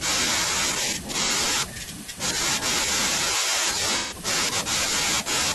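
Speech with two spots of AAC frame loss with concealment: a smeared, phasey patch from 1.24 to 1.32 s (about 43 ms, one frame), and a longer one from 3.97 to 4.14 s that fits three lost frames, where the decoder patches over the gaps from the last good spectrum.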